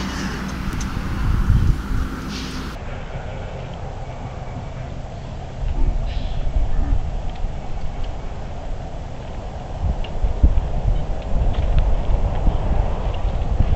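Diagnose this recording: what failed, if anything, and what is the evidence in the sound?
From 2.75 s to the end, the sound drops into a section at the wrong speed: it runs at half speed and sits about ten semitones lower, slow and deep. Speed and pitch fall together and stay fixed, which rules out a time-stretch (pitch would hold) and wow or drift (the rate would wander). The clean, instant change at 2.75 s points to the edit or playback stage, likely a segment clocked at the wrong rate.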